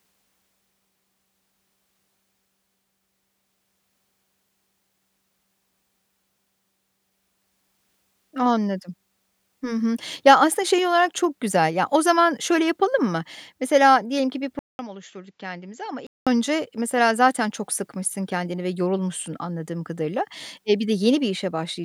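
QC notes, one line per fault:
14.59 to 16.27 s, input switched to a poorer device: there's a gap of about 200 ms, then the speech comes back duller and boxier, roughly 10 dB quieter, with nothing above about 7.6 kHz and a faint new noise floor sitting well under it. The likely cause is the recorder hopping to a different, narrower-band microphone or a headset's call profile, so the tone, level and background all change together until it clears again.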